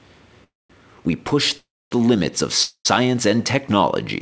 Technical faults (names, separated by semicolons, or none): call audio freeze